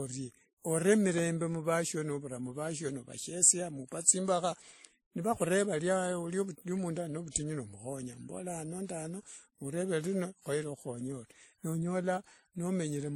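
From start to finish the audio has likely gone through transcoding between lossy codecs, an MP3-style encode re-coded as WMA. The second stage spends bits on the first stage's artefacts and adds its own, so both are heard together, and nothing remains above 17.7 kHz.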